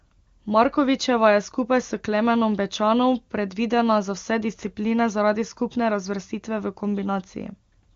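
Nothing goes wrong anywhere here; the speech comes through AMR wideband (HD Voice) at 23.85 kbit/s, so it has that codec's familiar band-limited character, with nothing above 7.1 kHz.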